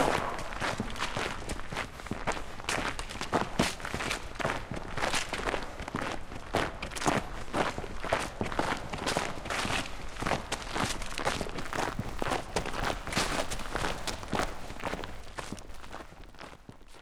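Filter restarted on every block, from 11.59 s to the end: the filter drops its stored state at each block boundary and begins from silence. Each block opens with a small transient, producing a 100 Hz buzz that rises and falls with the sound's level, which points to 10 ms blocks.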